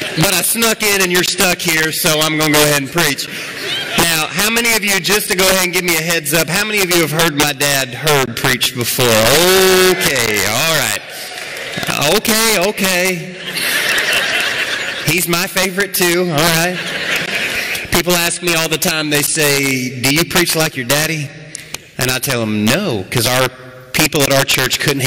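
Violent, sharp cracks break out on the loudest moments all through the audio, far harsher than ordinary clipping would sound. This is integer overflow: the signal is driven about 4 dB past the top of the integer range, and rather than being held at the limit, each peak that exceeds it wraps around to the opposite extreme. Only around one percent of samples go over, but every one jumps across the full scale, producing those abrupt snaps.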